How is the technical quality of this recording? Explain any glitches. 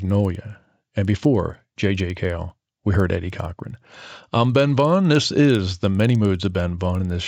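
The recording has one steady technical flaw, running throughout. A resampler restarted on every block: each 50 ms block was converted from 16 kHz to 48 kHz separately, leaving errors at its edges. The result is a 20 Hz ticking buzz, heard only while speech sounds, unlike hum, which persists through pauses.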